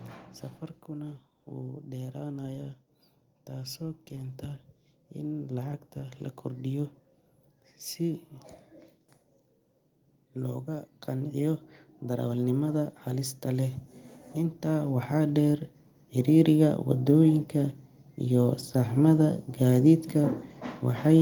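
Twice the whole recording swells louder, speech and background together: slowly from 0.86 to 8.31 s, by about 8 dB, then from 10.33 to 16.77 s, by about 10 dB. This is automatic gain rising, where the gain control judged the input too quiet and gradually turned it up.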